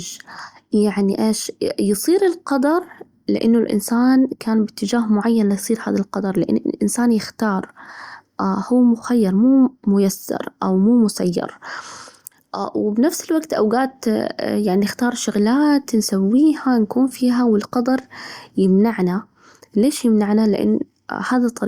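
No technical faults are audible.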